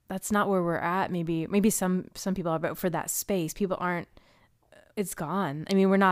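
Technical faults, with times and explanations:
No technical faults can be heard anywhere in this speech recording; the signal stays continuous and stable across its whole duration.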